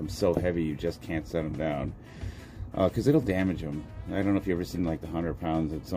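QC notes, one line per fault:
4.75–4.78 s, compressed frames skipped: the audio jumps forward by about two frames, roughly 20 ms of material, with a step size that fits a 10 ms frame length. No silence gap opens as it would in a dropout, and nothing repeats as in a stutter. The sound simply resumes slightly ahead of where it left off.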